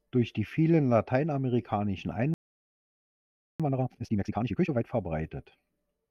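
Right after "die vielen lateinamerikanischen", at 2.34 s, the speech just drops out for about 1.26 s, until 3.60 s. That's a playback stall: the player most likely ran dry of data or had its thread blocked, so the output sat silent mid-phrase.

From 3.60 to 4.84 s you get the time-compressed catch-up. The player clears its backlog by snipping out small chunks and cross-fading the rest, so the speech runs at twice normal speed while keeping its pitch.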